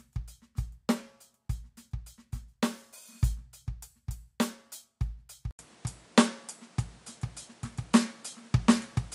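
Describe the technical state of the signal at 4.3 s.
The music runs intact at 4.3 s, with no audible fault at that moment.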